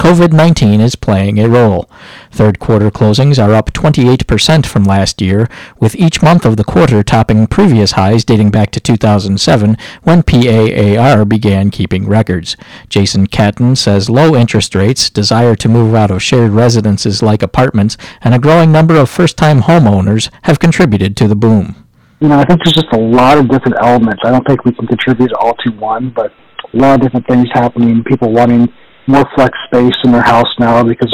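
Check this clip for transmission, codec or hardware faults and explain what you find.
There's one fault here, and it runs the whole way through: hard clipping. The signal is being pushed about 15 dB past what some stage in the chain can pass, so every peak gets sliced flat. Something like a tenth of the samples end up pinned at the limit. Those squared-off tops throw harmonics high up the spectrum, which is why every loud moment comes out as a harsh, gritty fuzz instead of clean peaks.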